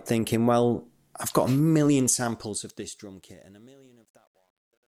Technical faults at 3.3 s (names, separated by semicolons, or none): truncation distortion on a fade